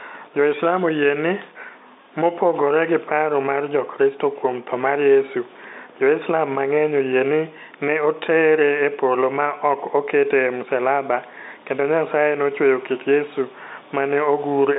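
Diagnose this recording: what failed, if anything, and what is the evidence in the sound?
Nothing has gone wrong here: the speech comes over an ordinary G.711 A-law phone line at 64 kbps, so it sits in the usual narrow telephone band of about 250 Hz to 3.7 kHz with nothing above about 3.8 kHz, which is simply what a normal landline call sounds like.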